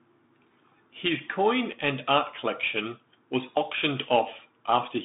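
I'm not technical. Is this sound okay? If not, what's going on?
No. A Bluetooth CVSD headset codec affects the speech from start to finish. This is the old phone-call mode of a Bluetooth headset: the sound is sent as a rapid stream of tiny up or down steps, which roughs up the detail. Here nothing above 3.8 kHz gets through and very low sound below about 150 Hz is thin, so the voice sounds muffled and boxy. S sounds turn scratchy, and a grainy hiss sits underneath.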